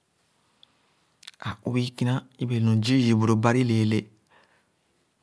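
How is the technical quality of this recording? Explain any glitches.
No glitches or faults present.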